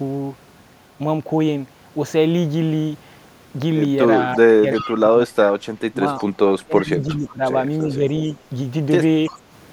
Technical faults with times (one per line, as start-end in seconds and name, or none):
4.35-5.32 speech suppressed in double talk
4.75-4.99 echo leak
5.91-6.01 speech suppressed in double talk
6.18-6.25 echo leak
6.64-7.41 speech suppressed in double talk
7.09-7.32 echo leak
7.97-8.03 speech suppressed in double talk
9.26-9.39 echo leak